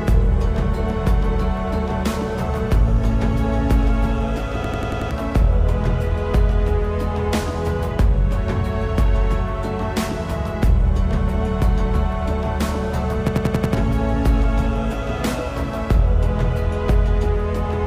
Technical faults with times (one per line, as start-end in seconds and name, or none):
4.64-5.11 system hang loop
13.28-13.75 system hang loop